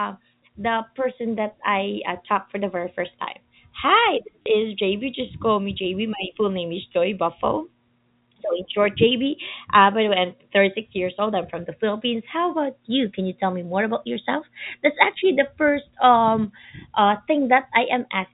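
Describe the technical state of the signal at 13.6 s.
At 13.6 s the audio is intact, with no fault at that moment.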